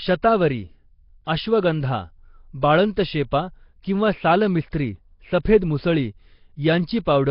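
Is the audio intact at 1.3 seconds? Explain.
No. A likely Nellymoser compression stage, with heavy damage fitting a roughly 22 kbps stream, starves weak bands of bits. The speech comes out rough and hissy, with nothing above 5.3 kHz.

Pre-echo sits just before that moment, from 1.25 to 1.27 s. Coding noise sized for a sharp attack spreads back over 22 ms, so a brief hiss smears the onset.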